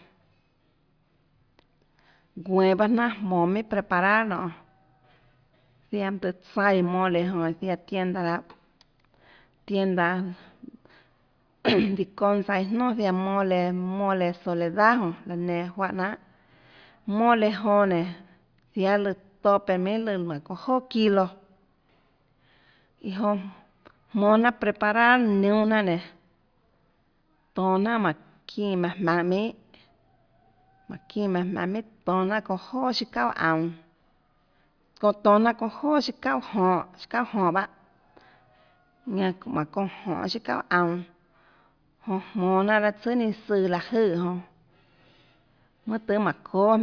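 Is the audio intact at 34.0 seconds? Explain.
Yes, at 34.0 seconds the audio is intact, with no dropout, glitch or other fault at that point.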